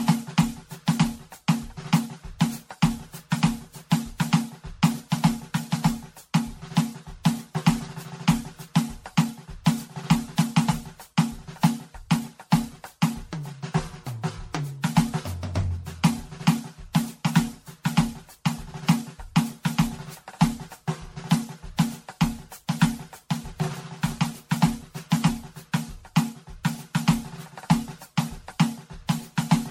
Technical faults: generation loss

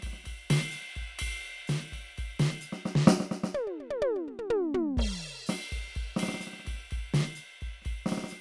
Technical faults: none

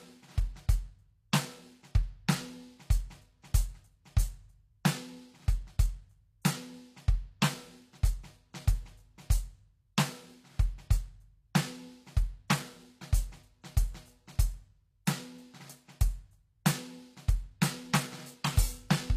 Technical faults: HE-AAC compression; pre-echo

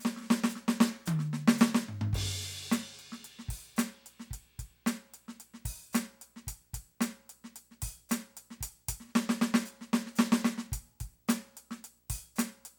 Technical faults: video or display buzz

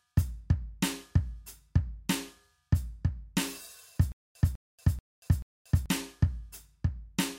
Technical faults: stutter with silent gaps

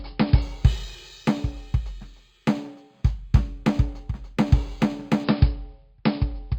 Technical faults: imaging from linear upsampling

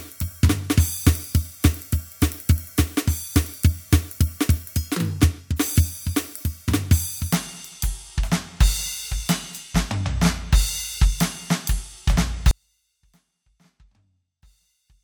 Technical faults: section at the wrong speed; audio dropout to a faint residue

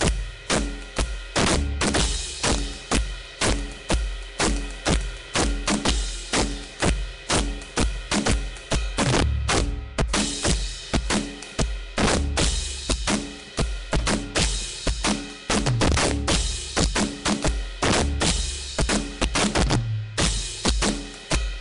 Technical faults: integer overflow; Nellymoser compression

